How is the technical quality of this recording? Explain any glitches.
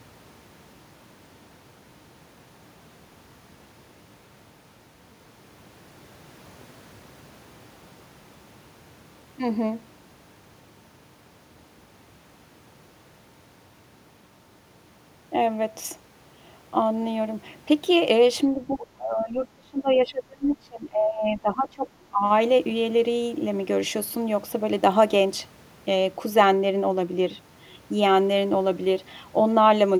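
One real glitch: speech suppressed in double talk from 18.54 to 22.23 s. The voice ducks by roughly 25 dB across about three seconds, likely an echo canceller that couldn't separate this talker from the far end during overlap.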